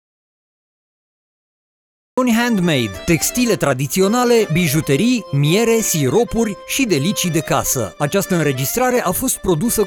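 The input signal was likely lost while the recorder kept writing silence, giving an audio dropout to silence from the very start until 2.18 s, with no room tone before sound comes in.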